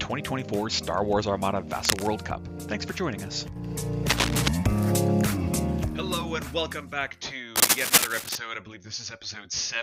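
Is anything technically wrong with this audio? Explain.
Yes, cable scratch noise occurs three times: 1.83 to 2.08 s, 4.08 to 4.48 s and 7.56 to 8.37 s. Likely a worn cable or connector shifting, its contact resistance fluctuating, it adds dense, ragged scratching roughly as loud as the sound itself, louder in the longest burst.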